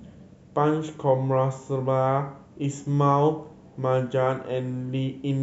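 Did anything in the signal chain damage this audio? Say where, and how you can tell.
No, no fault in the chain.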